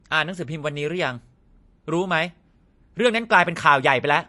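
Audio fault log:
throughout likely MP3 compression: flat cut at 11.3 kHz, watery swirl from weak bands flickering, fitting about 48 kbps; spectrogram shows a hard ceiling and patchy gaps.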